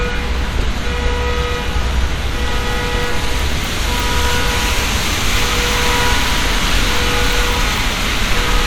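No technical faults are audible anywhere in this recording of sounds.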